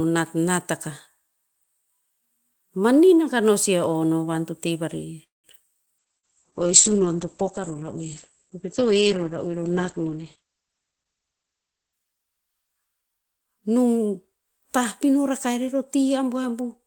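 Speech, with a cluster of network faults just after 5 s and a long stretch of reduced quality. At 5.23 s the sound stops and hangs until 5.47 s. The last sound carries on briefly, then about 160 ms of silence follows. Speech resumes where it left off, with nothing lost. This is a call audio freeze. The likely cause is packets held up in transit while the jitter buffer ran dry. The pause adds about 204 ms of delay. At 5.86 s there is a skip ahead. Playback jumps forward with almost no gap, to 5.89 s. Roughly 70 ms of speech is gone. Audio was dropped while later packets were already queued, and the two edges are joined nearly directly. That trims the accumulated delay by roughly 50 ms. From 5.99 s to 13.51 s comes a call bitrate drop. The speech turns coarse and muffled. The top end is cut off above 8 kHz, down from a full 20 kHz band. That points to the encoder being pushed from about 40 kbps down to about 9 kbps after the bandwidth estimate fell. 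It sits at its worst for about 5.3 s before recovering. Inside that stretch, from 6.06 s to 6.68 s, there is a jitter buffer slow-down. Speech plays at 91% speed with unchanged pitch. Sounds are drawn out. The receiver repeated pitch periods and pause fragments to rebuild its reserve, adding 64 ms in all. Overlapping that, from 6.18 s to 6.26 s, is a burst of packet loss. The last sound is held and faded for 52 ms. Speech then resumes further on, with 60 ms of audio missing. The receiver concealed the gap by extending and attenuating what it had, but nothing real came through for that span. Finally, from 10.93 s to 12.24 s, a jitter buffer speed-up makes the speech sound hurried. It runs at 115% speed, still at the same pitch. The buffer was holding more than its target, so short pieces of one or a few pitch periods were cut out repeatedly. Roughly 200 ms is removed across that stretch, pulling the delay back down.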